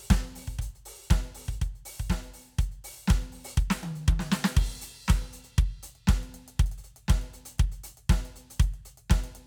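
Sample clock jitter runs throughout the music: an unsteady converter clock, off by a few microseconds, mistimes samples, adding hiss roughly 35 dB down on loud, bright passages.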